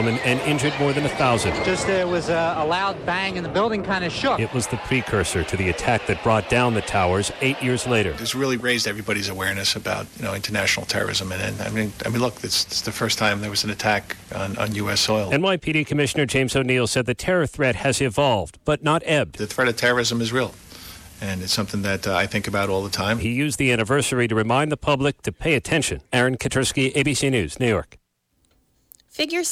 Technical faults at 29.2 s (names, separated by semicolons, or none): none